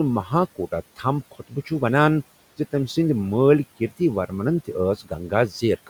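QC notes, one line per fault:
1.31–1.71 s and 4.98–5.12 s, speech cut by the noise suppressor: the suppressor mistook speech for background and pulled it down by about 17 dB just before "ونان زِ تمہِ" and about 16 dB after "ورمنن تہِ". Roughly a fifth and a tenth of a second of speech sound swallowed and faint, dipping toward the room noise that sits about 22 dB under the speech.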